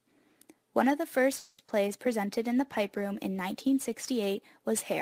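From 1.37 s to 1.75 s the sound stalls into a fading buzz or hiss for about 210 ms, then resumes where it left off, so nothing is skipped but everything after arrives that much later. This is a call audio freeze, likely caused by packets held up in transit until the jitter buffer ran dry.

Inside that stretch, at 1.66 to 1.70 s, a brief smear or wobble marks short concealed packet loss. About 20 ms never reached the decoder in time, and the receiver extended the preceding sound to cover the hole before blending back.

Between 2.39 s and 4.15 s the sound turns rougher and more watery. This is a call bitrate drop: the encoder was cut from 32 kbps to 17 kbps and held at the lower rate for about 1.7 s, coding the audio more coarsely until the rate recovered.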